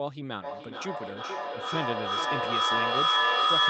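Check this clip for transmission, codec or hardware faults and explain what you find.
One fault is present: feedback echo between two devices, running from 0.42 s to the end of the clip. Two devices in the same room are on the call, and each microphone picks up the other's loudspeaker, which its own echo canceller cannot remove. The speech returns at an interval of roughly 0.4 s, and the repeats build rather than fade, peaking about 10 dB above the speech. On a spectrogram this shows as stacked, smeared copies of each syllable at regular spacing, all sharing the codec's top edge at 8 kHz. The waveform's envelope swells instead of decaying.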